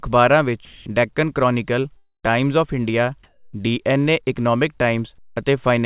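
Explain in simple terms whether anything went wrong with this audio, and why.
The speech has a few gaps and patches. At 0.65 to 0.86 s, 3.23 to 3.53 s and 5.18 to 5.36 s, the real background is replaced by a flat, featureless hiss. This is comfort noise in place of the background, likely from the sender pausing transmission when it heard no speech.

From 1.97 to 2.32 s the sound smears into a fading buzz and then goes silent before resuming. That is a long network dropout, most likely lost packets, and that piece of audio never returns.

At 5.35 s the sound begins abruptly, with its soft start missing. That is an onset clipped by the voice detector, likely because it noticed too late that sound had resumed.

The whole clip also has the narrow, telephone-like sound of a call line, with nothing above 4 kHz.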